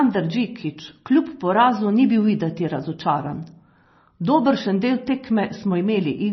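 From start to finish the speech has a hard ceiling: nothing gets through above about 5.9 kHz, so s sounds go dull and lisping. Within that band the sound is watery and swirly, with weak detail flickering in and out as the encoder starves some frequency lines of bits. That heavy damage is likely MP3 compression, and the low cut-off points to a very low bitrate, something like 24 kbps.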